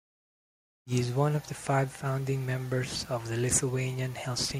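The speech signal has no technical faults: it stays intact, with no dropouts, distortion or other artefacts to report.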